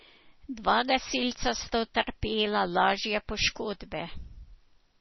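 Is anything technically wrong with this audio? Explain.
Yes. MP3 compression runs throughout: likely encoding at a starved bitrate near 24 kbps, cutting everything above 5.9 kHz and dropping weak frequency lines, leaving heavy watery swirl in the speech.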